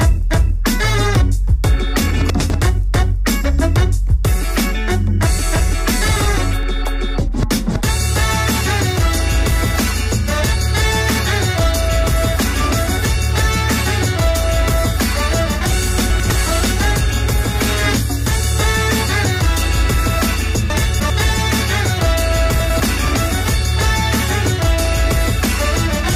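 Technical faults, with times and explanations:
2.1 to 24.9 s, clock drift buffer slips: A short click recurs at a steady 4.56 s spacing, roughly seven times across this span. Each click is a small block of roughly 70 samples being dropped or repeated. The regularity points to a likely cause of two devices running on separate clocks that disagree by a few hundred parts per million, so the buffer between them slowly fills or drains until it must jump. Unlike the out-of-order chunks, nothing sounds jumbled; there is only a brief tick at metronome-like intervals.
2.3 to 2.5 s, 16.1 to 16.3 s, 20.7 to 21.1 s and 22.6 to 22.8 s, chunks out of order: At each of these points the audio briefly scrambles. A 100 ms chunk plays one slot late, after the chunk that should follow it. At 20.7 s it plays three slots late, which makes the longest stretch. No audio is missing, but the reordering leaves three hard joins. 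What separates these from the drift slips is the irregular timing and the audible garbling of the sound's order, rather than a lone tick.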